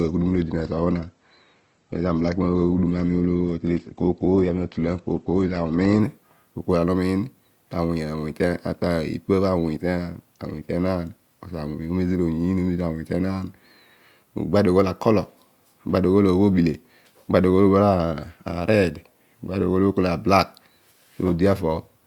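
An adaptive stream starting at a low bitrate affects the speech from 0.0 to 6.0 s. To begin playback quickly, the player opened on a lean version of the stream, and nothing above 8.2 kHz reaches the ear, so the speech sounds dull and smeared with codec artefacts, consistent with Opus at around 16 kbit/s. At 6.0 s it switches to a richer version, fitting roughly 64 kbit/s, and the treble returns at once with no gap.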